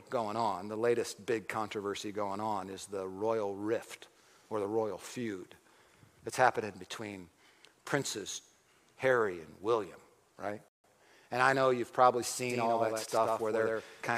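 At 10.68 s the sound drops to silence for 0.16 s, then picks up exactly where it stopped: a rebuffering stall, the player waiting on downloaded audio. From 12.50 s to the end, a dry, roughly 100 ms late copy sits about 5 dB under the original, likely a doubled audio track from a second capture path.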